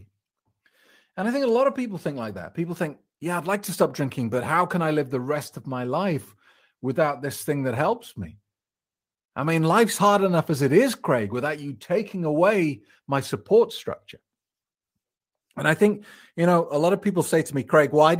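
No technical faults can be heard anywhere in this speech recording.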